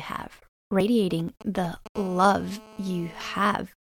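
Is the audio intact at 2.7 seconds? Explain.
No. At 2.73 s the audio skips: a brief slice, around 20 ms, is missing, and the sound on either side is butted together with no gap, producing a small jump in the waveform. This is the pattern of audio missing between chunks. The likely cause is a recorder or processor that handles audio in blocks, here consistent with half-second chunks, and drops about 20 ms each time it closes one block and opens the next.

That moment also falls inside a hard, raspy buzz running from 1.96 to 3.44 s, pitched at about 217 Hz and stacked with harmonics, sitting about 21 dB below the speech and holding steady throughout. This is GSM phone buzz: a 2G handset nearby on an active call transmits in radio bursts 217 times per second, and the audio circuitry rectifies those pulses into an audible tone that has nothing to do with the recorded speech.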